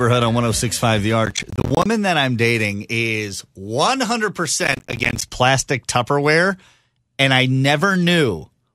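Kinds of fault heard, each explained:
Processor overload crackle: the processor keeps missing buffer deadlines, and each late buffer plays as a sharp-edged drop to silence. Each gap lasts around 10 ms, a few dozen per burst. Gritty tearing runs from 1.26 to 1.86 s, ending just before "that I'm dating is", and again from 4.64 to 5.22 s. On a waveform, dense notches cut to near silence with vertical edges; a spectrogram shows gaps striped by broadband vertical click lines.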